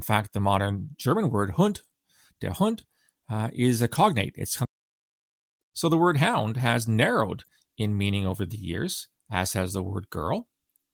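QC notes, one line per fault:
4.65–5.61 s, playback stall: the speech cuts out mid-flow and the output goes silent for just under a second (about 0.96 s) before the sound comes back. That clean drop to silence, rather than a click or smeared audio, points to the player likely running dry of data or having its thread blocked until it recovered. The light Opus compression on the speech stays the same on either side of the gap.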